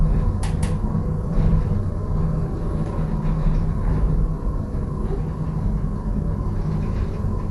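Likely Dolby Digital compression runs throughout: nothing sounds above 11.4 kHz, and the sound is dull and roughened by dither noise filling unfunded bands, fitting roughly 64 kbps.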